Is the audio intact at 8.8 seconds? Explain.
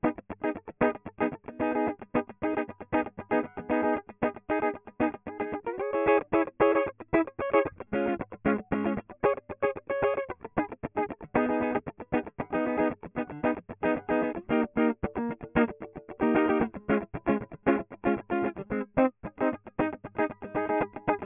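Yes, the music plays through 8.8 seconds with no audible fault.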